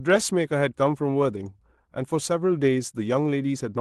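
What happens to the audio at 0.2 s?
Nothing goes wrong at 0.2 s: the speech comes through intact there, carried over the call path with its normal codec coding and no dropout, glitch or other fault at that moment.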